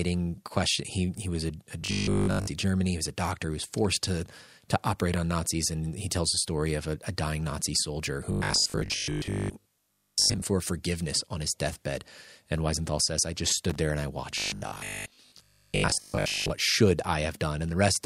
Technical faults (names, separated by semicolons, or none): robotic sound from repeated short buffers; loose connector crackle